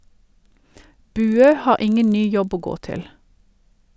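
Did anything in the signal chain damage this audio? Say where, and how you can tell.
Yes. The sample-rate conversion stage has a resampler restarted on every block: it converted each 40 ms block on its own instead of carrying filter history across block edges, which fits a 44.1 kHz to 16 kHz conversion. Each edge gets a small error, so throughout the speech there is a buzz repeating at 25 Hz, one tick per block. It is present only while the speech is.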